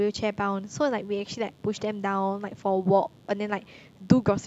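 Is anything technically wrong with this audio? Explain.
Yes. A mains buzz runs under the speech for the whole clip. Its base is 50 Hz, and the spectrum is full of harmonics. Sharp switching spikes, like those from a dimmer, a rectifier or a missing shield, enter the signal twice per mains cycle. Those spikes spread energy from 50 Hz up into the kilohertz range. The result is a steady, raspy buzz rather than a smooth hum. It sits low, roughly 40 dB below the speech.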